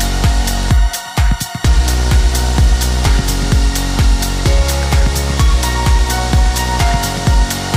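A bit error spike hits at 1.1 s: two consecutive samples were corrupted by a flipped bit, jumping to about -18 dBFS and back, giving one sharp broadband tick.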